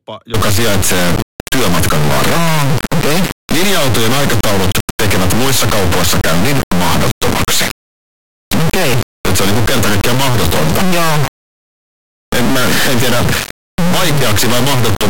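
Integer read as float runs from 0.34 s to the end of the clip at 15.10 s. The sound points to 32-bit integer samples being interpreted as 32-bit floating-point values. The resulting numbers are either nearly zero or far beyond full scale, so the output slams between silence and the clipping limit. The speech becomes an extremely loud, harsh square-wave buzz that drops out to silence whenever the signal gets very quiet.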